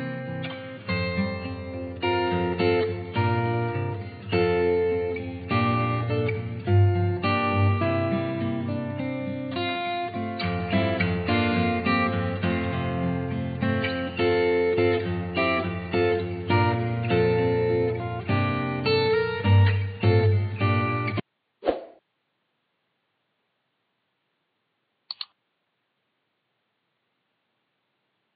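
Nothing technical stands out anywhere in this audio, so there's no fault to point to and no cause to chase.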